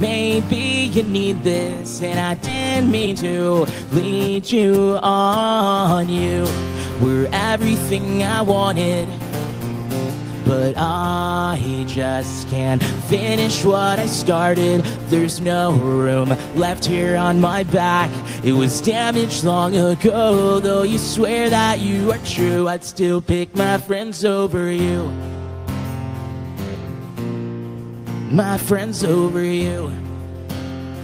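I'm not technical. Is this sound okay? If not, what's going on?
No. At 2.45 s the audio suddenly jumps forward. About three quarters of a second is missing, and the two sides are joined with no gap. This is a skip ahead, where a chunk of delayed audio was thrown away to catch up.

From 2.56 to 4.65 s the sound then runs about 16% fast but keeps the same pitch, so it feels hurried. This is a jitter buffer speed-up: the player trims tiny slices to remove roughly a third of a second of built-up delay.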